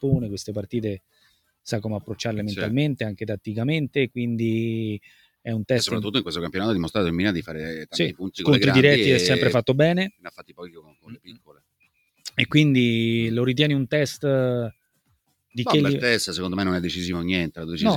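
A noise suppressor meant for speech was left running on this sound, so held sounds sink throughout the clip. It treats steady tones and tails as noise and rides them down by around 10 dB, while attacks slip through mostly intact. On top of that, there are four stretches where the suppressor cuts the sound hard: 0.99 to 1.66 s (about 20 dB down), 5.01 to 5.46 s (about 16 dB), 10.11 to 12.31 s (about 21 dB, the longest at roughly two seconds) and 14.94 to 15.55 s (about 20 dB). Held material sinks or its decay gets chopped off there.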